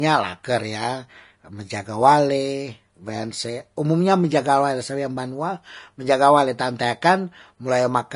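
From start to finish the speech carries plainly audible codec damage, likely from Vorbis compression at a low setting, which fits a bitrate around 33 kbps. Nothing remains above about 10.5 kHz, and the treble just below that edge turns hissy and grainy, because fine detail has been replaced by noise of similar energy. Unlike a plain low-pass filter, the upper band is roughened rather than simply dulled, and attacks are blurred.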